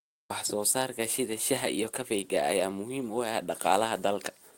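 At 0.45 s there is a brief lost packet rebuilt from error correction. The stream dropped what sounds like a single packet, and the decoder filled the hole with the lower-bitrate copy carried in the following packet, so the speech runs on without a gap. The replaced stretch lasts about 20 ms and comes through coarser and noisier than the audio around it, a short roughening rather than a dropout.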